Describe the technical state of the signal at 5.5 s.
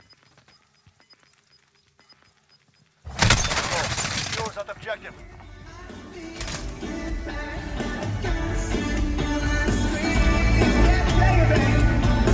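Around 5.5 s the signal is intact, with no audible dropout, distortion, glitch or other fault at that point.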